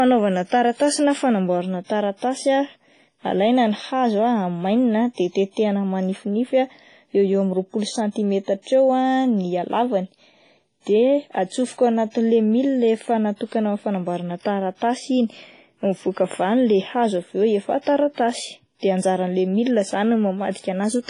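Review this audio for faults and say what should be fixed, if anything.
Likely WMA compression at a low bitrate, around 24 kbps judging by the sound, has damaged the whole speech clip heavily. Its long transform blocks smear quantisation noise into a ringing, washy hiss that breathes with the signal, and nothing survives above 10.3 kHz. Keep the original recording and encode from it at a higher bitrate or with a lossless format.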